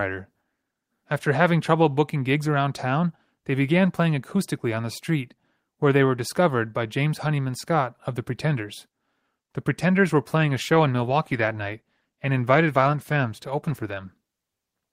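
From 10.43 s to the end, a call bitrate drop from 32 to 18 kbps codes the speech coarsely, so it sounds rough and watery, with blotchy spectrogram detail.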